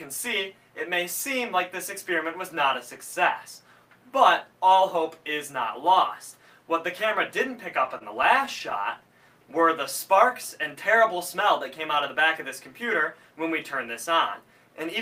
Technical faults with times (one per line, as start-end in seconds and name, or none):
7.87-8.73 repeated stalls (stutter)